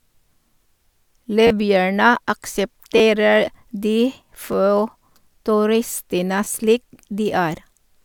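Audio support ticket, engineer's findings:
Short stutters in the speech, heard as clicks or a brief buzz at 1.47–1.50 s, 2.98–3.00 s, 4.52 s and 6.44–6.46 s. Repeated buffer: output underrun, so the device replayed its last block of about 10.7 ms (fits a 512-sample buffer) three, two, one and two extra times, each with a hard join. Roughly 10 to 30 ms of speech dropped per event. Check the audio callback for timing overruns.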